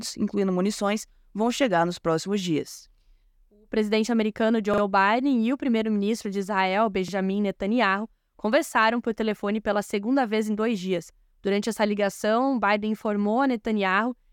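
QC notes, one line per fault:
4.74–4.82 s, repeated buffer: right after "presidente americano", new audio missed its deadline and the device replayed its last block twice more, so a piece of about 43 ms, consistent with a 2048-sample buffer, sounds three times with a hard join at each seam, heard as a quick stutter. Nothing seems to go missing; the sound resumes where it left off.
7.08–7.13 s, repeated buffer: the same underrun recurs, this time with one extra play of a roughly 43 ms block, giving a single brief stutter.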